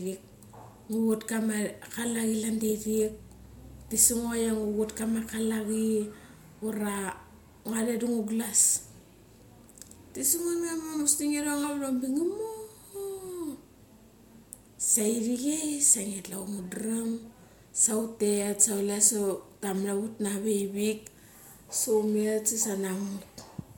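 A speech recording with no technical faults to report.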